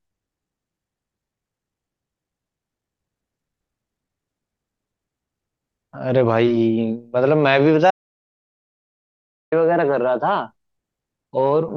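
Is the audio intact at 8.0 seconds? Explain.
No. An audio dropout to silence runs from 7.91 to 9.52 s. The speech cuts to silence for 1.6 s, likely from lost input.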